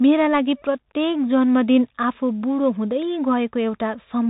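Throughout the speech, the audio has passed through a Bluetooth CVSD headset codec, which encodes each sample as a single up-or-down bit and adapts its step size as it goes, consistent with a 64 kbps headset link. Nothing above about 3.8 kHz survives, so the speech is boxed into a thin telephone band. The damage is plainly audible: s sounds turn scratchy, loud bright moments distort where the step can't keep up, and a granular hiss sits underneath.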